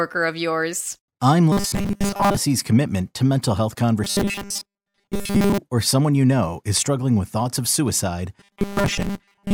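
A speech clip with robotic sound from repeated short buffers in three stretches. From 1.52 to 2.37 s, right after "of yours I'm", and again from 4.04 to 5.58 s, after "commitment to mental health", the voice collapses into a stiff metallic buzz at 200 Hz. The same happens from 8.40 s, after "with thoughts of suicide", through to the end. The cause is likely a starved stream looping a 5 ms chunk, with most of the real audio skipped.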